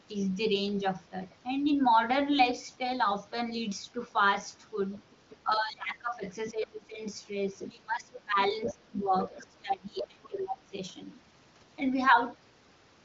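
From 4.95 to 5.36 s a faint second voice sits about 25 dB under the speech: the other side's voice leaking through, likely because the echo canceller missed part of the loudspeaker signal. It returns from 6.5 to 6.66 s at about 15 dB down. From 7.61 to 10.42 s it is stronger, about 10 dB down. On a spectrogram it shows as a weaker set of harmonic traces overlapping the main ones.

From 5.44 to 7.01 s, and again from 7.69 to 10.72 s, the main talker dips by up to about 20 dB, covering roughly 1.5 s and then 2 s. This is speech suppressed in double talk, likely the canceller attenuating everything while both sides talk at once. The waveform envelope shows sudden hollows.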